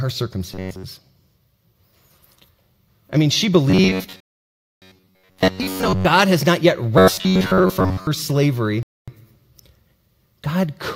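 Robotic sound from repeated short buffers hits this speech clip at 0.53–0.83 s, 3.70–6.06 s (after "I mean she", ending before "has not yet") and 6.98–8.07 s (right after "has not yet"). Audio likely arrived too slowly, so a slice of about 10.7 ms was looped over most of each stretch, imposing a rigid 93.8 Hz metallic buzz. A rebuffering stall cuts the sound to silence at 4.20–4.82 s and 8.83–9.08 s while the player waits for data, then resumes where it stopped, adding about 0.62 s and 0.25 s.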